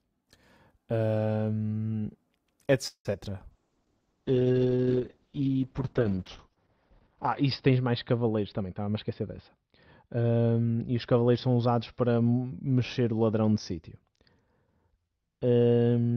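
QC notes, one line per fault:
2.87–3.07 s, call audio freeze: packets were likely held up in transit and the jitter buffer ran dry, so the receiver extended the last sound for about 175 ms as a fading buzz or hiss, with roughly 90 ms of near silence. Playback then resumes where it stopped, adding a gap without losing audio.
3.13 s, short concealed packet loss: about 20 ms of the stream never reached the decoder in time, and the receiver patched the hole by continuing the preceding sound before blending back. It comes across as a brief smear or wobble in the speech.
3.51–16.17 s, call bitrate drop: the bandwidth estimate fell and the encoder was pushed from 40 kbps down to 7 kbps, staying at the lowest rate for about 3.9 s. Coarser coding and a cut-off near 6 kHz leave the speech rough, watery and muffled to the end.
8.52–10.39 s, jitter buffer speed-up: the buffer held more audio than its target, so the receiver trimmed many short pitch-period slices, around 150 ms in total. 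Speech runs about 9% faster at an unchanged pitch and sounds hurried.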